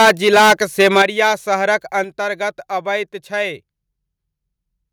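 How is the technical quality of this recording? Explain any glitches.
The recording has two problems: harsh distortion at the start, then two sudden drops in level.

From 0.0 to 1.29 s the loudest peaks are flattened and crackle. This is likely microphone overload. The input ran about 12 dB too hot. Roughly a tenth of the samples hit the converter's ceiling and lost their tops.

At 1.02 s the whole signal falls by about 9 dB, and at 2.04 s by about 5 dB more. Voice and background drop together. This is likely the microphone volume being stepped down by software reacting to the overload.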